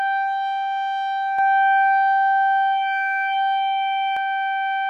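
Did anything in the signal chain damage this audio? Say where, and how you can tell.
Yes. A second copy of the music was likely mixed in by a slower parallel capture path or an out-of-step edit, giving a doubled audio track from 1.39 to 4.17 s. The duplicate trails by roughly 150 ms at about equal level, with no decay, starting and stopping abruptly.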